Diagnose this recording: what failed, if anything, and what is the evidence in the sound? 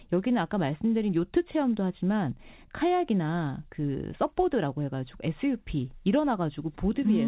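Nothing failed; the speech passes through intact.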